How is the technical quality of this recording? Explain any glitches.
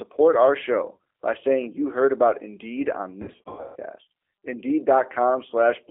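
The recording is limited by low-bitrate telephone coding throughout, with two dropout episodes where the decoder had to fill in missing audio.

G.729 codec: For the whole clip, the speech sits in a narrow 300 Hz to 3.4 kHz telephone band with plainly audible codec damage: a rough, slightly synthetic texture typical of 8 kbit/s G.729A. The codec rebuilds each short frame from a vocal-tract filter model, a pitch predictor and a handful of pulses rather than the actual waveform. That loses fine detail and gives the voice its rough, processed edge.

VoIP packet loss concealed by the speech codec: At about 0.96 s there is a brief hitch, consistent with one lost packet covering roughly 30 ms. A much worse stretch runs from 3.22 to 3.77 s, where about 390 ms of audio is missing, scattered across 540 ms, with the longest gap at 150 ms. In each gap the decoder repeats its last pitch and filter settings and reduces the gain frame by frame. 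The speech therefore smears into a fading buzzy tone or coloured noise and sounds weak and distorted until it recovers.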